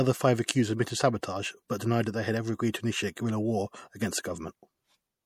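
Most likely the speech went through MP3 compression at a low bitrate, around 64 kbps judging by the sound, so the encoder starved its weaker frequency lines of bits for the whole clip. The damage is plainly audible throughout. Quiet spectral detail flickers in and out between frames, giving the speech a watery, swirling texture with chirpy sibilants and softened onsets. The top is cut off cleanly, with nothing above 19.4 kHz.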